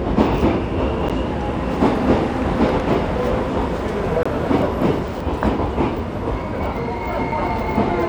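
A recording of sounds, interrupted three times by a block of digital silence: about 12 ms at 1.09 s, 23 ms from 4.23 to 4.26 s, and about 6 ms at 7.31 s. Each time the signal drops straight to silence and returns with no fade. The shortest gaps come across as ticks, and the 23 ms one as a brief hole. The lengths fit buffers of 512, 1024 and 256 samples, which points to output buffers left unfilled in time.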